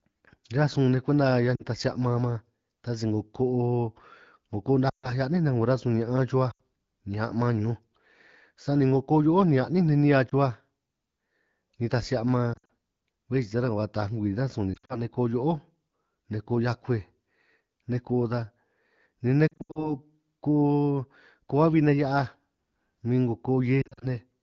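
Lost AMR speech frames cause dips, warbles and near-silent dropouts at 1.55, 4.89, 6.51, 10.29, 12.53, 14.74, 19.48 and 23.82 s. The decoder repeats the last good settings at falling gain. The 200 ms of lost frames at 19.48 s fades and returns weak or rough. The AMR wideband (HD Voice) codec around it sounds clear.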